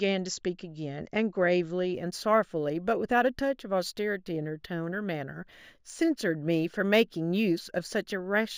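Imaging from linear upsampling runs from 1.94 s to the end of the clip. The speech appears to have been raised to a higher rate by joining neighbouring samples with straight lines, which fits a step from 16 kHz to 48 kHz. That crude interpolation filters poorly, so the top of the original band sounds dulled while a faint mirrored copy of it, roughly 30 dB down, sits between 8 and 16 kHz, adding a thin metallic shimmer to sibilants.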